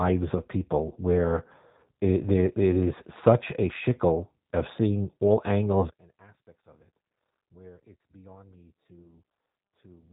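Throughout, the speech carries G.729 codec damage: nothing above 3.8 kHz survives, and the pulse-based rebuild sounds rough and synthetic, unlike the smeared warble of a plain low bitrate. From 5.90 s to the end the level falls by about 27 dB to a faint residue, likely one channel inverted cancelling the centred speech in mono rather than a simple fade or gain drop.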